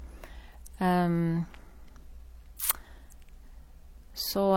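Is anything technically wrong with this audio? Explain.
Yes. Throughout the speech, likely transcoding between lossy codecs: MP3-style smearing sits under HE-AAC swirl, nothing above 18.5 kHz, two layered artefact types rather than one codec's.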